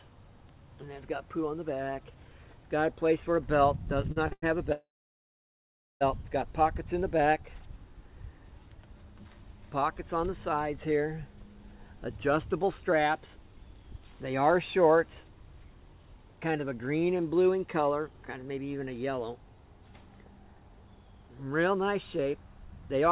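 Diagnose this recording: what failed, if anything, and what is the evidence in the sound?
Repeated stalls (stutter) at the network jitter buffer, 4.02 to 4.44 s: four short holds, longest 99 ms, stretch the audio rather than dropping any.

Call audio freeze, 4.72 to 6.03 s: one long hold fades to 1.1 s of silence, then resumes intact, likely network delay emptying the jitter buffer.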